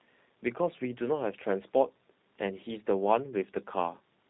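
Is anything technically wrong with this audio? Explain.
Yes. Throughout the speech, G.729 codec coding is plainly audible. The signal is rebuilt from a vocal tract filter, pitch predictor and sparse pulses at a rate consistent with 8 kbit/s, so nothing above 4 kHz survives, leaving a muffled, slightly rough, synthetic voice.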